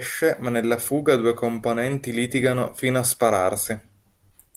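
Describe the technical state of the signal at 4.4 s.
At 4.4 s the speech signal is intact, with no audible fault at that moment.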